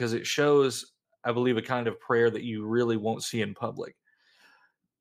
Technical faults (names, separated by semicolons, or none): none